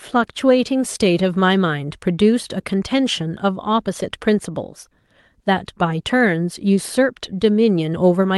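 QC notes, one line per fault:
Nothing stood out on listening to the speech as it came through the call path.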